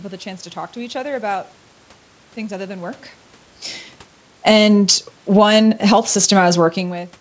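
At 4.32 s the automatic gain falling begins. The gain control judged the speech too loud and cut its gain by about 8 dB by 4.66 s. The voice and room noise sink together. A second automatic gain falling runs from 5.21 to 6.09 s, a drop of about 6 dB.

Overlapping these, automatic gain rising starts at 4.57 s. The control decided the input was too quiet and lifted gain by about 4 dB until 6.78 s. Voice and background swell together, fighting the cuts.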